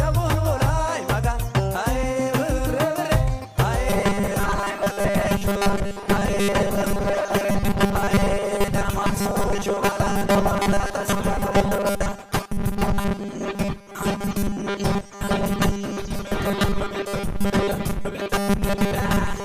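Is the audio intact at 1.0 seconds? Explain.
Yes, at 1.0 seconds the audio is intact, with no dropout, click, distortion or other fault at that point.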